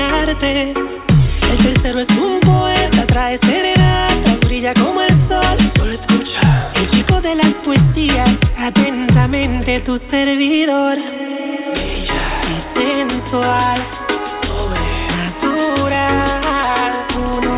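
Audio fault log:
No faults logged; the audio carries nothing above 4 kHz, which fits a 64 kbps G.711 A-law call path working as intended.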